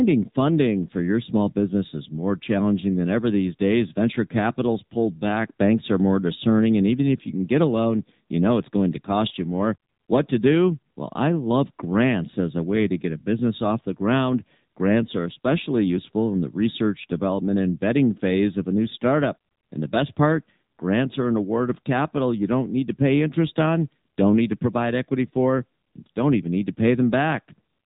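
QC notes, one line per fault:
Throughout, AMR narrowband mobile codec: nothing above 3.8 kHz survives, so the speech has that boxed-in phone-call sound. The pulse-driven vocal-tract model adds a plainly audible buzzy, synthetic edge, which points to a low AMR-NB mode around 7.4 kbps.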